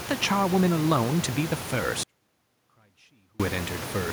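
At 2.03 s the speech drops out to a faint residue, about 35 dB below normal, and returns abruptly at 3.40 s, 1.36 s later. The likely cause is a signal loss while the path stayed live. Unlike a pause or fade, both edges are sudden.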